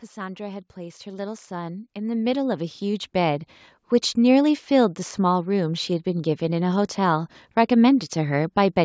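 Automatic gain rising affects this speech recording: from 0.14 to 3.51 s the gain control, judging the input too quiet, steadily raises its level by about 15 dB, so voice and background noise swell together, with a call microphone's band limit leaving nothing above 8 kHz.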